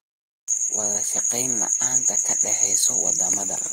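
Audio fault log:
Nothing faulty can be heard in the speech here. There is no event to log at any point in the clip.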